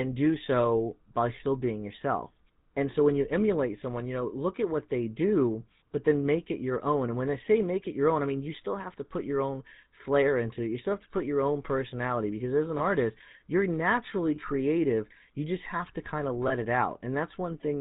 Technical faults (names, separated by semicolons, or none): GSM full-rate codec; lost GSM frames